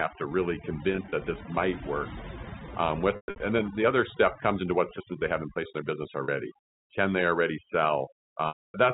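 A speech recording carries overdone noise removal throughout: the suppressor pushed bands near its noise estimate almost to nothing, so the background is near silent with twinkling specks. On a spectrogram the gaps between words are black with scattered isolated dots, and weaker upper harmonics are chopped into holes. There is also packet loss with pitch repetition, where the receiver filled missing audio by looping the last pitch period. Between "to really" and "that this might work", from 0.92 to 1.12 s, about 100 ms went missing in short runs of at most 20 ms, heard as brief buzzy holds. From 3.16 to 3.40 s, 200 ms was lost, including a 120 ms run that fades toward silence. After "place in their business", a 40 ms loss at 6.24 s gives a slight held buzz. From 8.48 to 8.74 s, a 260 ms loss fades out before the sound resumes through a short cross-fade. On a spectrogram these show as flat, copied harmonic stripes that thin to blank. 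In the waveform they show as identical repeated cycles dying away. The narrow telephone band, capped at 4 kHz, fits the G.711 line the call travelled over.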